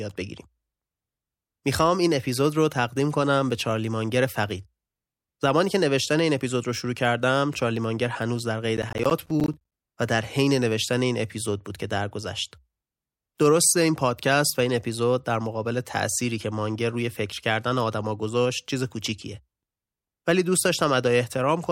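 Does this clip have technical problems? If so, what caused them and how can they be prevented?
Yes. From 8.77 to 9.72 s the speech is overlaid with processor overload crackle, a gritty tearing lasting just under a second. The processor could not finish its audio buffers on time, so many deadlines were missed in a row. Each miss dropped in a short hard-edged gap of silence. The spacing fits buffers of around 10 ms, with about twenty missed across the burst. To prevent it, reduce the processing load or use larger audio buffers.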